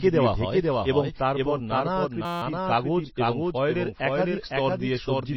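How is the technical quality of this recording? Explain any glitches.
The technical quality is poor, with three distinct faults.

Throughout the clip, the speech is heard twice, with a second full-band copy trailing the first by about half a second at roughly 5 dB lower. This doubled audio track most likely comes from the same signal being captured a second time through a slower path. The copy carries no reverberant tail or room colouring, so it sounds like a clean, detached echo. On a waveform, each syllable burst reappears as a smaller duplicate half a second later. A spectrogram shows every harmonic pattern repeated at that offset.

Throughout, the sound is also watery and swirly with smeared onsets, which points to MP3 compression at a low bitrate, likely around 24 kbps. Starved of bits, the encoder drops weaker frequency lines, and they flicker on and off from frame to frame. The treble is cut off entirely above 5.8 kHz. 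On a spectrogram this appears as a hard ceiling at 5.8 kHz, with speckled, patchy holes in the energy below it.

From 2.25 to 2.42 s, between "হয় এবং তারপর নানা" and "কাগজ এবং ফয়েলের", a system hang loop interrupts the speech with a steady buzz. The machine stalled while the audio hardware kept replaying one 5.8 ms stretch of its ring buffer, which fits a 256-sample buffer. That stretch repeats 29 times, producing a 172 Hz tone. Essentially no audio is lost. A waveform shows an identical short cycle tiled across that span, and a spectrogram shows flat harmonic stripes spaced 172 Hz apart.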